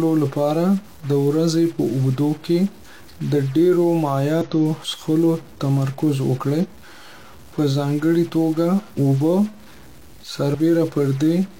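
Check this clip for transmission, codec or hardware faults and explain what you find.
Two kinds of fault show up in this speech clip, one running the whole way through and one hitting at three moments.

A distortion sits on the audio from start to finish, and the pauses don't go quiet; they fill with a hiss-like noise. That pattern points to a stuck bit, likely a broken data line or converter holding one bit at a fixed value. About half the samples end up off by that bit's weight, which roughens everything, and near silence the error flips with the waveform's sign, so it turns into noise.

There are also three short glitches from damaged data in a compressed stream: at 4.42 s, right before "څښلو تمرکز"; from 6.60 to 6.66 s, just after "څښلو تمرکز"; and from 10.50 to 10.56 s. Corrupted bytes leave the decoder unable to read those frames, so it loses sync and skips forward to the next valid frame header.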